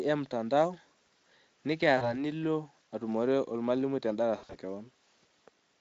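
VoIP packet loss concealed by the speech codec appears in this speech clip at 1.97 to 2.13 s and 4.37 to 4.56 s. About 40 ms is lost first, then 120 ms scattered across 160 ms, the longest gap 60 ms. The decoder extrapolates its last pitch and filter with falling gain, giving buzzy or noisy fading stretches that stay weak briefly afterward. The Speex encoding underneath leaves only light codec roughness.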